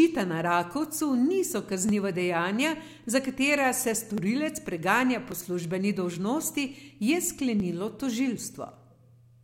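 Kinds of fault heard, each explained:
Clock drift buffer slips: a click every 1.14 s from 0.75 to 8.75 s in the speech, likely mismatched device clocks forcing a few dozen samples to drop or repeat.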